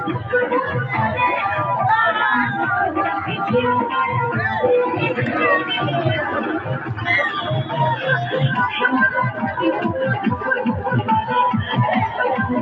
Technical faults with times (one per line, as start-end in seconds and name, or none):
6.78-6.95 sound cut by the noise suppressor